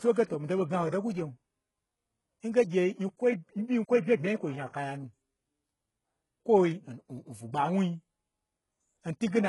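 Throughout the speech, the top end sounds rebuilt rather than recorded: s sounds turn gritty and metallic, and nothing exists above 11.4 kHz. This is likely heavy HE-AAC compression, whose pasted-up treble fits a bitrate near 12 kbps; a spectrogram shows blocky, repeated high bands ending in a hard ceiling.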